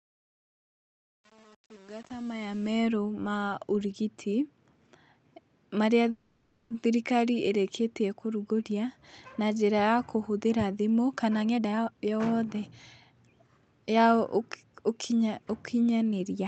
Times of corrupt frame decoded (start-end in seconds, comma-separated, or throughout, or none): none